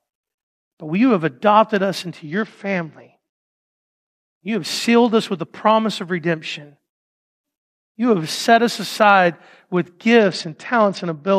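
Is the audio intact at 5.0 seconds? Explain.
No. At 5.0 s, as throughout the speech, there is a block size mismatch (truncated): one stage hands over longer blocks than the next reads, so each block's tail is discarded. This produces a steady 43.1 Hz buzz, consistent with 1024-sample blocks, while the pace stays at its normal speed. On a spectrogram, thin vertical lines recur about every 23 ms. On the waveform, small steps or jumps appear at that same interval.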